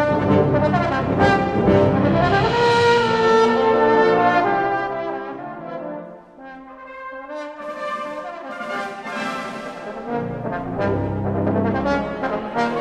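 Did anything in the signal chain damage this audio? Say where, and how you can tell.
Yes. At the driver or buffer stage, a gain change from 4.32 to 5.50 s was applied in unsmoothed, block-sized steps, about fifty per second, while the level dropped roughly 15 dB. Each jump clicks, so the fade carries an audible zipper noise.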